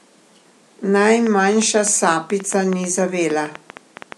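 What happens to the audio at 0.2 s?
Nothing goes wrong at 0.2 s; the audio is intact at that moment.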